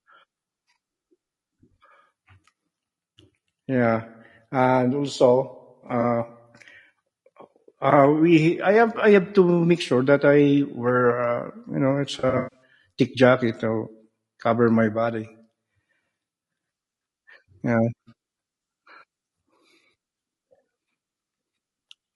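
A speech recording. Throughout, the voice sounds rough and grainy. Noise fills the gaps between the harmonics, and the top band sounds thin and synthetic. The damage is plainly audible. The likely cause is low-delay AAC compression of the AAC-ELD kind used for video calls, at a rate that fits about 32 kbps. Its short frames resolve pitch harmonics poorly, so at this rate the voice loses clean structure.

There are two bursts of AAC frame loss with concealment. From 5.87 to 6.04 s, about 40 ms of audio is missing in very brief gaps. The decoder patches them from the last good spectrum, so the sound briefly smears and turns noisy. From 12.19 to 12.62 s the damage is worse. About 240 ms is lost, with one run of roughly 150 ms. There the sound decays toward silence and then fades back in.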